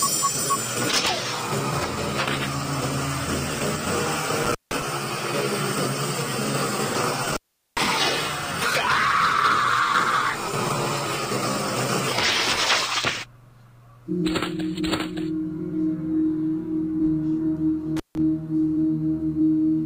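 Intermittent contact breaks the audio three times: at 4.43–4.83 s, 7.24–7.89 s and 17.97–18.18 s. A loose cable or plug briefly opens the signal path, so the sound drops out for about 165 ms, 403 ms and 154 ms, with crackle at each break and faint hiss while the connection is open.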